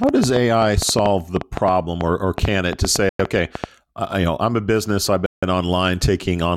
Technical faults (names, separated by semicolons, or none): train of clicks; Bluetooth stall